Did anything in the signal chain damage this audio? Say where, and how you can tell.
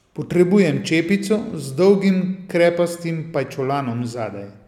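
No, nothing in the signal chain damaged this audio.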